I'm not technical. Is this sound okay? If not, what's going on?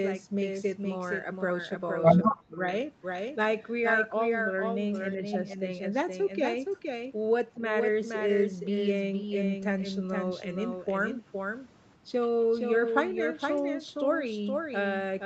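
No. A second, slightly quieter copy of the speech trails the original by about half a second throughout, likely a doubled audio track from the audio being captured twice. From 2.25 to 2.58 s the voice nearly vanishes, likely speech suppressed in double talk, where the echo canceller turned it down while both sides spoke.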